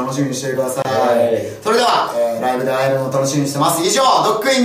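A gap at a join of encoded pieces opens at 0.82 s and lasts until 0.85 s, a silence of about 27 ms cut into otherwise continuous sound. The audio was encoded in separate pieces and joined without trimming, so the encoder's start-up delay and the padding on the previous piece's final frame both remain as dead air. The drop's edges are smeared by the codec, so the truly silent part is shorter, and the sound then resumes exactly where it stopped.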